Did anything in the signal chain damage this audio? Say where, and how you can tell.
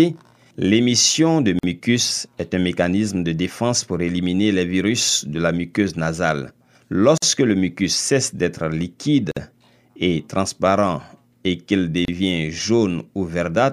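Yes, at the codec stage: gaps at joins of encoded pieces at 1.59, 7.18, 9.31 and 12.05 s. These are 31 to 51 ms silences from untrimmed encoder delay and padding.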